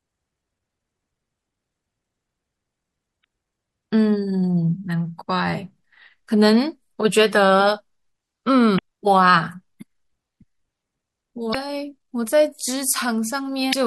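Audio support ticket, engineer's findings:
Watery, swirly speech throughout, plainly audible; likely MP3 compression at a low rate, sound suggests about 64 kbps. Spectrogram: flickering high-band holes frame to frame.

Damaged data in compressed stream: brief glitches at 3.21–3.24, 8.75–8.79, 11.51–11.56, 13.69–13.74 s. Decoder lost sync and resynced. Waveform shows jagged discontinuities; spectrogram shows vertical broadband smears.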